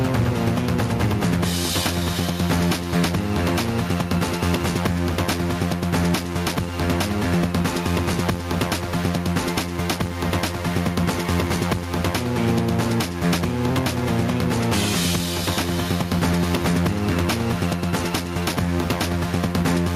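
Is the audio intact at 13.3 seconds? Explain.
No. At 13.3 seconds, as everywhere in this clip, gain pumping is present. The level swells in the gaps and ducks under each loud sound, a swing of around 10 dB, most likely because the input gain is set far too high and a fast limiter clamps it down on every peak. On a waveform the envelope looks flattened, with quiet stretches bulging upward, and a spectrogram shows the background noise floor brightening and dimming in step with the louder moments.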